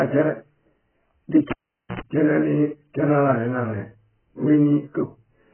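From the start, the speech is dull and smeared, with nothing above 3.1 kHz and a warbling texture. This is likely AAC compression at a very low bitrate, near 9 kbps.

At 1.51 s the cable is pulled and plugged in. A pop starts about 0.46 s of near silence, with 60 Hz mains buzz for 88 ms within it, and another pop at 2.01 s.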